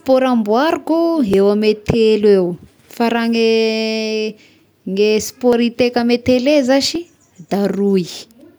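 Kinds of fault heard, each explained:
Dropped buffer (overrun): at 1.34 s before "eo ame telo", 5.53 s before "hiteka amin'ny", and 6.95 s, the speech skips ahead without any gap, losing roughly 10 to 20 ms, likely from samples overwritten by hardware before being read.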